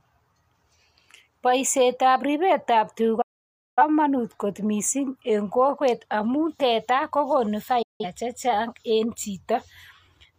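Speech with two digital broadcast dropouts. The receiver lost valid frames and muted with a quick fade. Silence runs 3.21 to 3.83 s, before "kot mising eng kokwet", and 7.82 to 8.05 s, between "teta kogonu" and "chechang en".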